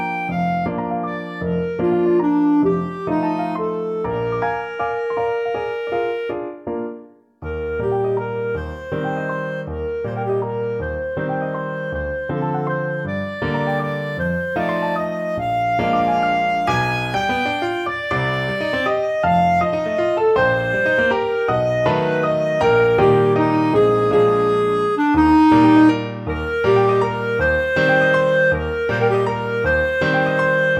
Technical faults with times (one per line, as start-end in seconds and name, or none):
13.69-15.63 sample clock jitter